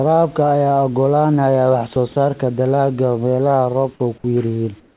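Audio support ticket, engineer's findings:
Sound dropped by the voice detector: brief gaps in the speech at 1.94 s, 2.12–2.16 s, 3.94–4.00 s and 4.18–4.24 s, each filled with steady hiss. Likely cause: the sender's detector misread soft speech as background and paused transmission.

Comfort noise in place of the background: from 4.80 s to the end, the room background turns flat and featureless, about 2 dB quieter. Likely discontinuous transmission, with the receiver synthesising noise during the pause. Audio is band-limited at 4 kHz, consistent with a narrowband G.711 call path.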